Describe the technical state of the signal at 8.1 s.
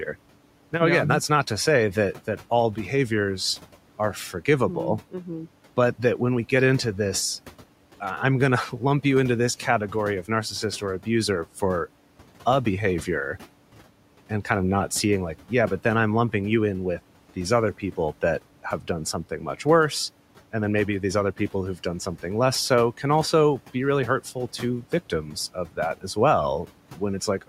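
At 8.1 s there is a burst of loose connector crackle, running from about 8.07 to 8.11 s, just before "I'm going". A worn or dirty contact is momentarily losing and regaining connection, chopping the signal. It sounds like a short, ragged scratch rather than one clean click, and its irregular texture sets it apart from a digital dropout or a single transient, with room noise about 21 dB below the speech.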